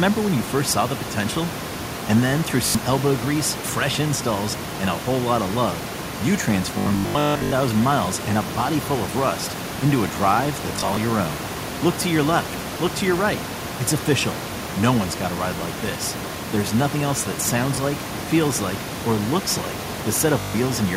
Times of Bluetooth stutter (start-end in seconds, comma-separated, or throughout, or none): 2.66-2.75, 6.78-7.52, 10.76-10.97, 17.75-17.77, 20.40-20.54